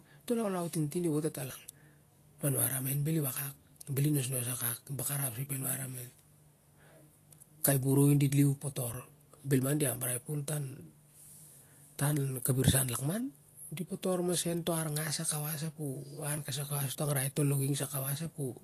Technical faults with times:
0.00-18.63 Vorbis compression
8.94 audio missing between chunks
13.90 audio missing between chunks
16.38 audio missing between chunks

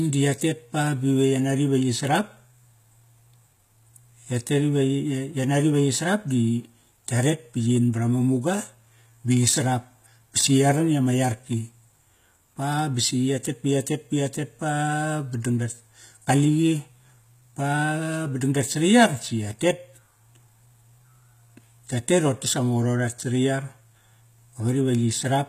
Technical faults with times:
0.00-25.49 HE-AAC compression

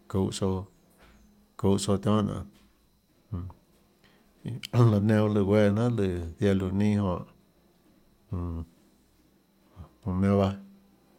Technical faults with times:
none

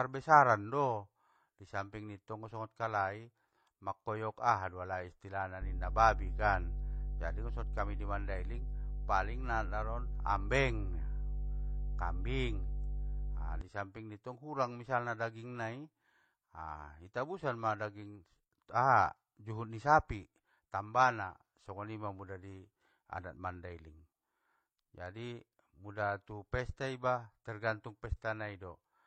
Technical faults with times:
0.00-29.06 transcoding between lossy codecs
5.61-13.61 mains hum

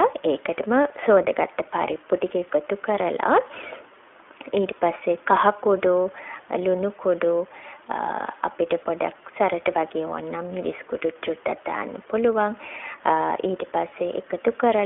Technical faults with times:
0.00-14.85 iLBC codec

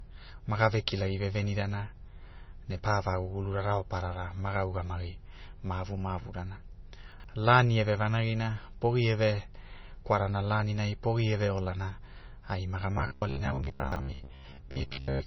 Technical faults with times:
0.00-15.27 MP3 compression
7.12-7.24 chunks out of order
12.98-15.26 robotic sound from repeated short buffers
13.80-13.96 chunks out of order

